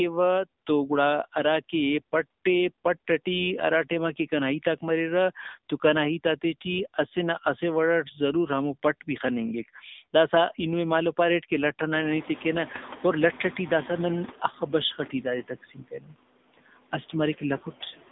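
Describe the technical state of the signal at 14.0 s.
At 14.0 s the noise suppressor is catching up, in a span running from 11.95 to 14.44 s, just after "مالو پاریٹ کہ لٹ". The room noise jumps by about 23 dB around 12 s. The suppressor's running estimate of the steady noise floor still reflects the quieter level before the jump, so it applies only about 11 dB of reduction. At 14.0 s the louder noise is still coming through with less reduction under the speech. It settles lower as the estimate adapts over roughly 2.5 s.

Noise suppressor artifacts are present here as throughout. The suppressor works frame by frame, pulling down each frequency band it judges to be noise, reaching about 17 dB once fully adapted. At this moment the partly reduced noise around the speech dips between phrases and swells back under them.

The AMR narrowband mobile codec is also audible throughout, plainly so at 14.0 s. 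The line passes only about 200 Hz to 3.7 kHz, with nothing above 3.8 kHz. The speech is rebuilt from a vocal-tract model excited by sparse pulses. The buzzy, synthetic quality points to a low mode of roughly 8 kbps. The codec also turns the louder background noise into a swirling, churning texture.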